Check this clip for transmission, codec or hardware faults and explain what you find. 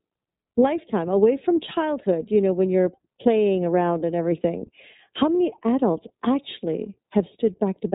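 The speech is carried through the iLBC codec for its whole length. The codec is a narrowband VoIP coder working in 30 ms frames, and the damage is plainly audible. Each frame's excitation is coded on its own, without drawing on the previous frame, so the fine structure of the voice is rebuilt coarsely and sounds a little rough and synthetic. Nothing above 3.8 kHz gets through, which leaves the speech muffled and telephone-like. The coarseness fits iLBC's lower 13.33 kbps mode.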